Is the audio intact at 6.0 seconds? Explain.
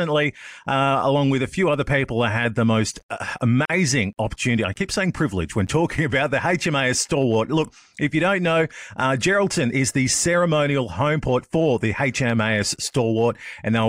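Yes, at 6.0 seconds the speech is intact, with no audible dropout, click, distortion or other fault at that point.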